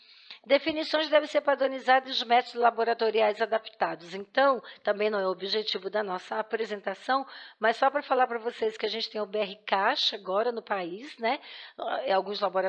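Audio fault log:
No faults are heard anywhere in this clip. Nothing in the sound stands out as a technical problem at any point.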